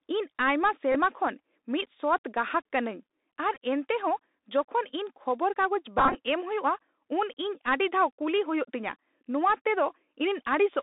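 Throughout, the speech carries Bluetooth CVSD headset codec damage. The band runs only from 250 Hz to 3.7 kHz, s sounds turn scratchy, loud bright syllables smear as the delta step lags, and a granular hiss sits underneath. That grain, rather than clean band-limiting, fits a 64 kbps CVSD link.

A Bluetooth headset packet repeated fault appears at 0.92 to 0.96 s, just before "ᱠᱷᱚᱱ ᱢᱤᱫ", again at 3.55 s, and scattered across 5.98 to 6.15 s, with the longest run around 20 ms. Replayed packet bits give a brief buzz near 267 Hz rather than a silent gap.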